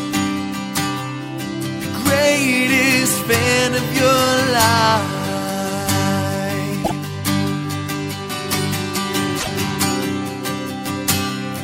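Repeated frames appear twice in this audio, at 6.83 to 6.96 s and at 9.39 to 9.47 s. A 130.6 ms block and then a 26.1 ms block play one extra time, heard as stutters. Compressed frames were duplicated in writing or transmission, lengthening the audio by those amounts.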